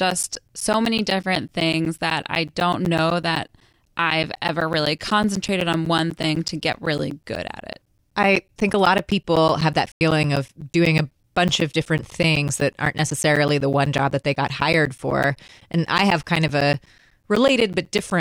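From 0.10 s to 18.11 s, regular ticks sound through the speech every 0.125 s. These are periodic USB or driver dropouts, each blanking roughly 10 ms of audio with silence, around 150 times. At 9.92 s a sudden 94 ms hole cuts the speech until 10.01 s, a corrupt frame muted. The decoder rejected a damaged compressed frame, which fits a single lost frame, and silence filled it.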